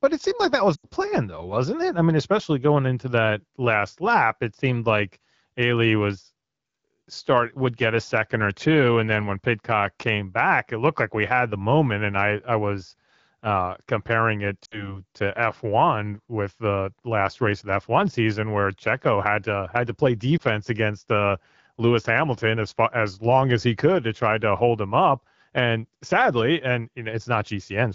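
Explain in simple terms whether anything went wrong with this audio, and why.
Lost AMR speech frames cause brief dips at 0.75 to 0.87 s, 14.65 to 15.0 s and 20.37 to 20.42 s. Radio errors spoiled bits of speech, so the phone briefly guessed the sound.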